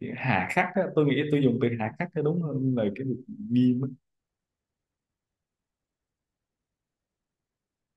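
A speech recording whose signal shows no audible technical fault at any point.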